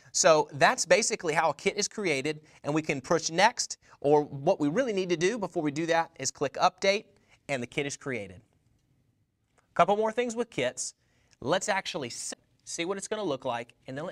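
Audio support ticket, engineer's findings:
Damaged data in compressed stream, 12.29 to 12.37 s: brief chirp, squawk, click or short hole lasting about 80 ms. Probable component: stored file or stream transport. Corrupt bytes are misread by the decoder, which loses sync and hunts for the next frame header.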